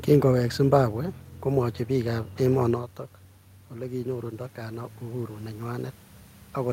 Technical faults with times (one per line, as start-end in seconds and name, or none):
3.73-5.67 automatic gain rising